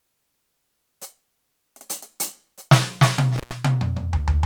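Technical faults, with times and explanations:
3.36–3.53 s, intermittent contact: the music drops out for about 120 ms as a loose connection briefly opens, with crackle at each edge and faint hiss between. The waveform shows a near-flat gap bracketed by sharp spikes; the spectrogram shows broadband vertical streaks around a dark band.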